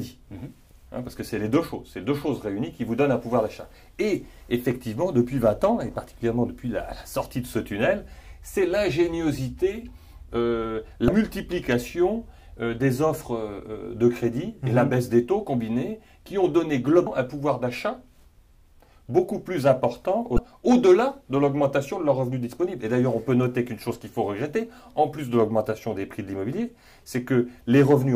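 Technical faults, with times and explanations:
11.05 s, 17.03 s and 20.35 s, damaged data in a compressed stream: three brief blips, each about 0.03 s long, where corrupted bytes made the decoder misread frames and resync at the next header.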